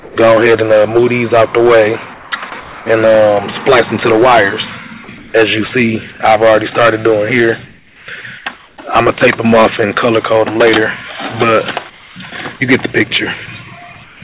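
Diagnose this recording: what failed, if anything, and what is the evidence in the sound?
Hard clipping runs through the whole clip. Peaks are cut flat, so every loud passage carries a harsh fuzz rather than occasional crackle. The overload is about 15 dB past the limit, with roughly 7 percent of samples driven over it. The stage is a gain or conversion stage that received more level than it could pass. The flat tops generate harmonics that pile up toward the top of the band, which ends at 4 kHz on this G.711 call path.

Comfort noise in place of the background appears at 0.00–0.16, 2.14–2.86, 5.18–5.34, 6.12–6.20, 7.66–8.78, 11.90–12.16 and 14.04–14.22 s. In each gap the real background gives way to a smooth, featureless hiss, about 3 to 6 dB quieter in most gaps and level at 6.12 s. This is call processing. The sender likely stopped transmitting during pauses, and the receiver synthesised shaped noise until the sound resumed.

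Sound dropped by the voice detector occurs once, at 2.50 s, inside the 2.14–2.86 s comfort-noise stretch. About 10 ms of real sound is missing there, replaced by the same steady synthetic noise. The likely cause is the sender's voice detector treating that fragment as background and withholding it, with comfort noise filling the slot until transmission restarted.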